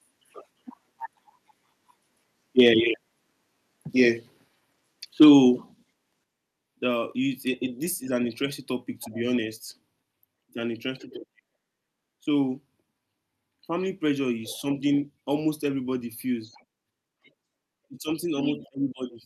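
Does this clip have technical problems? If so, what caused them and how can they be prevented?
Yes. Microphone overload, likely from input gain set too high, drives peaks about 2 dB past the converter's limit at 2.59 to 2.68 s and 5.21 to 5.30 s, flattening their tops into a harsh crackle. Set the input gain lower so the loudest syllables stay well below full scale.

The microphone volume was stepped down, likely by the call software reacting to those overloads. Level drops abruptly by about 2 dB at 5.24 s and about 6 dB at 6.24 s. Disable automatic microphone adjustment and fix the level manually before recording.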